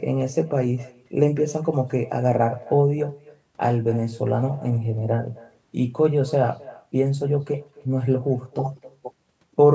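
Speech with an echo with no canceller running throughout: each phrase returns roughly a third of a second later as a quieter, thinner copy about 23 dB down, picked up from the far end's loudspeaker. The call microphone processing band-limits the audio to 8 kHz.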